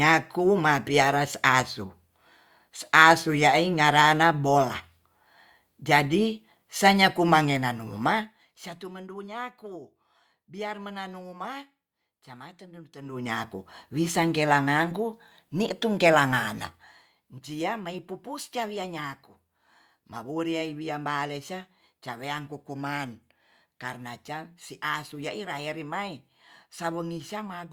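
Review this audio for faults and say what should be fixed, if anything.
Zipper noise in this speech at 12.97–13.32 s and 16.60–17.14 s. The level moves in unsmoothed steps at roughly 100 per second, about 1 dB each on the rise of roughly 15 dB and finer on the fall of roughly 10 dB. Each step clicks, giving a ticking texture.

Prevent it by ramping gain per sample or interpolating across each buffer instead of jumping between values.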